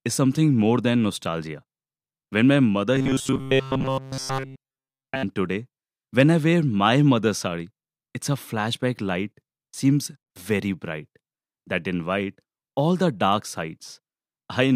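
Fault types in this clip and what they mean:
Robotic sound from repeated short buffers: from 2.95 to 5.23 s speech becomes a stiff 133 Hz metallic buzz, likely from a 7.5 ms chunk looping throughout.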